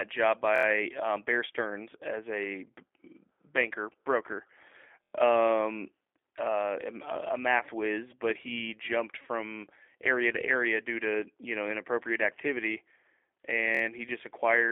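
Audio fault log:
throughout: G.729 codec. Speech sounds rough and slightly synthetic, as heard when an 8 kbit/s-class coder rebuilds each frame from a vocal tract filter, pitch predictor and sparse pulses. Nothing passes above 3.5 kHz, leaving a narrow telephone band of roughly 300 Hz to 3.4 kHz.
0.56–0.65 s, 5.04–5.13 s, 13.75–13.82 s: repeated buffer. A piece about 23 ms long plays four extra times, hard-joined at each repeat, giving a short stutter. This fits a 1024-sample buffer being reissued when new audio arrives late. The first occurs just before "um bear stearns as". The second falls between "banker broker" and "um uh a math". The third repeats three extra times. Little or no audio seems lost.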